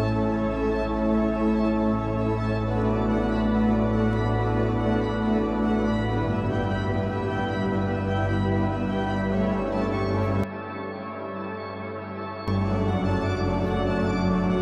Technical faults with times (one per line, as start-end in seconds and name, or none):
10.44-12.48 input switched to a poorer device